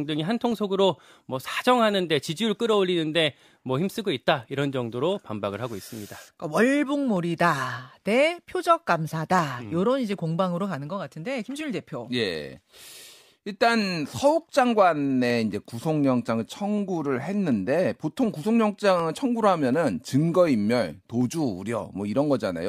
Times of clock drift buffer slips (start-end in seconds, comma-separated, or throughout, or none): 0.52-22.69